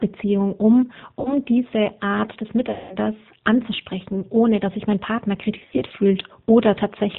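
Rough, slightly synthetic speech, band-limited with nothing above 4 kHz, runs throughout, which fits G.729 coding at 8 kbit/s rebuilding the voice from a filter and sparse pulses. Stretched, fading stretches appear at 1.20–1.37 s, at 2.71–2.97 s just before "anzusprechen ohne dass sich", and as scattered short dropouts of up to 20 ms each at 5.59–5.83 s. They come from VoIP packet loss concealed by the speech codec, which extrapolates from the last good frame while the speech stays weak afterwards.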